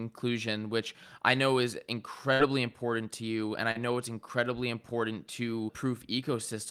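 Speech with two network faults. At 2.33 to 2.41 s, a burst of packet loss drops about 60 ms; the receiver extends and fades the last sound before resuming later. At 3.71 to 3.77 s, a short concealed packet loss of about 40 ms is patched by synthesised continuation, heard as a brief smear.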